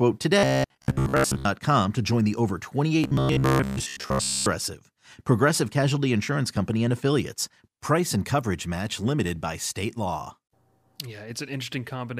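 From 0.39 to 1.45 s, before "to join the over", and again from 3.04 to 4.48 s, robotic sound from repeated short buffers gives the speech a metallic 66.7 Hz buzz, likely from a 15 ms chunk being looped in place of most of the audio. A spectrogram shows rigid, evenly spaced harmonics, and the waveform shows identical repeating cycles.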